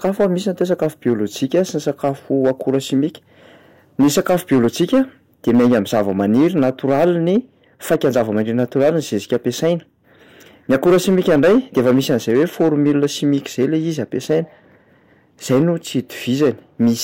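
Somewhere in the chain the speech was driven about 8 dB beyond what a stage could pass, so hard clipping runs through the whole recording, with a few percent of samples sliced off flat at the ceiling. Those squared-off peaks throw energy into high harmonics that were never in the voice, so stressed syllables and loud onsets sound distorted, while quieter passages stay comparatively clean.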